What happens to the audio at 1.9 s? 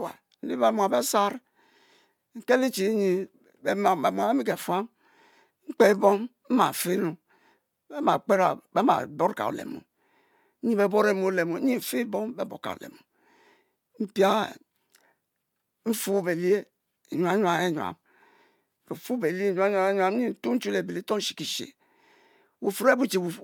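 Nothing goes wrong at 1.9 s: the speech runs through that moment intact, with no dropout, click, glitch or other fault.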